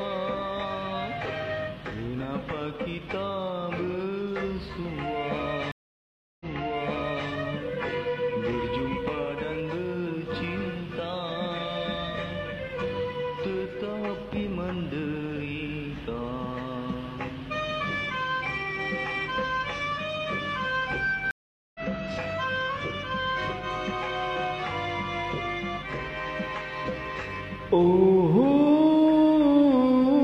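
At 5.72 s there's a stream reconnect: the link drops, 0.69 s of silence, then a fresh decoder picks up 0.88 s earlier, so a bit repeats. At 21.31 s it happens again, 0.44 s gap, resuming about 0.4 s later, skipping ahead.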